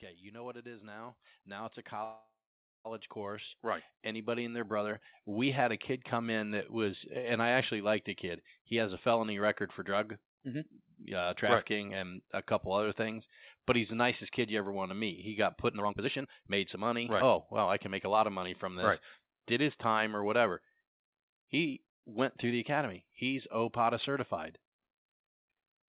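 From 0.2 s to about 5.09 s, an automatic gain rise is at work: the gain control judged the incoming level too low and kept raising it, by about 16 dB in total. The speech and the background noise behind it swell together, with no sudden jump. Throughout, the audio is band-limited by a narrowband call codec, consistent with G.711 mu-law, so nothing is heard above 4 kHz.

Inside that rise, from 2.04 s to 2.87 s, the speech stops and a fill sound takes over for about 807 ms. The last sound is carried on as a fading buzz that drops to near silence for about 490 ms, then the speech resumes where it left off, with nothing lost but an 807 ms gap and added delay. This is likely a call audio freeze, caused by held-up packets draining the jitter buffer.

From 9.83 s to 11.20 s, just before "trafficking right and a", a jitter buffer speed-up trims the delay by removing short pitch-period-sized pieces of audio, roughly 70 ms in total. 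The speech runs about 5% fast at unchanged pitch, a subtle hurry.

A stronger jitter buffer speed-up follows from 15.68 s to 18.80 s, cutting out well over half a second. Here the speech runs about 22% fast, still at its normal pitch, and sounds clearly rushed.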